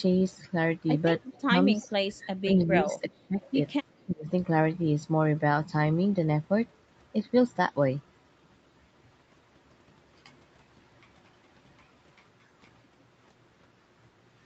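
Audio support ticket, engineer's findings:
Echo leak, likely far-end echo canceller on loudspeaker side passing residual echo back. Delayed copy of the speech, 352 ms behind, at 1.23–1.31 s (about 15 dB below the speech), 1.81–1.88 s and 3.43–3.52 s (both about 30 dB down). Short, faint trailing scraps. Consistent delay across all three points to one echo path, not room reflections.

Speech suppressed in double talk, likely same canceller failing to separate near talker from loudspeaker echo during overlap and attenuating both. Level dips at 1.30–1.56 s (deepest around 20 dB, overlapping the first echo), 2.43–2.51 s (around 20 dB), 2.82–3.40 s (around 15 dB, the longest stretch) and 4.06–4.28 s (around 25 dB). Heard as the voice ducking or dropping out in pieces. Band tops out at 8 kHz, as expected from Opus on the call path.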